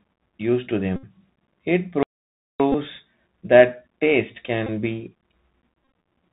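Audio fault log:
Throughout, Bluetooth CVSD headset codec: the speech is squeezed into the narrowband headset format, one up-or-down bit per sample at 64 kHz with an adapting step, so nothing above 4 kHz survives. The damage is plainly audible here: a grainy hiss sits under everything, s sounds come out scratchy, and louder bright moments outrun the step size and break up, giving the whole clip that muffled, gritty phone-headset character.
0.96 to 1.04 s, Bluetooth headset packet repeated: right after "used to", about 71 ms of voice packets went missing and the chip kept decoding the last good packet over again. Since each packet lasts 3.75 ms, that repetition turns into a short steady buzz near 267 Hz rather than a gap, lasting until fresh packets return.
2.03 to 2.60 s, playback stall: the sound just stops mid-flow for roughly 570 ms of silence, then carries on. That's the player having nothing to output, likely because its buffer ran dry or its thread got blocked for a moment.
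2.72 s, 4.67 s, Bluetooth headset packet repeated: two brief repeats of about 19 ms each, the second just after "that taste". Each is a short run of repeated packets, so each gives a brief burst of the buzz near 267 Hz before good packets return.
5.83 to 5.95 s, Bluetooth headset packet repeated: around 79 ms of losses scattered over 120 ms, with the longest unbroken run about 30 ms. This one comes across as a rough, choppy buzzing stretch, the 267 Hz repeat pattern flickering in and out between good packets.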